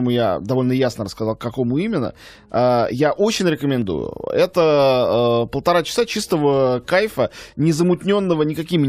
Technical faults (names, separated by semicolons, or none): overlap between stream segments